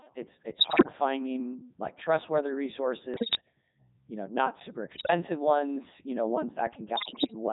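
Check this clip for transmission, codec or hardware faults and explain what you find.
Two faults are present: the whole recording runs through a very low-rate vocoder, and four short stretches carry corrupted radio data.

Throughout, the speech sounds robotic and buzzy, with the natural texture of the voice flattened. This is the Codec 2 vocoder at what sounds like its 3.2 kbit/s mode. Only pitch, voicing, energy and a spectral envelope are transmitted, so the decoder rebuilds the voice from sine waves and the original waveform is lost.

At 0.60 to 0.92 s (between "it's it's" and "finding like trustworthy"), 3.14 to 3.41 s, 4.92 to 5.10 s (after "you know not super", before "ones you know") and 6.96 to 7.33 s, the voice lurches in pitch and level and breaks into warbles and bleeps. These are bit errors on digital voice radio. Flipped bits, several percent of them and roughly a tenth in the third burst, corrupt the parameters for whole frames.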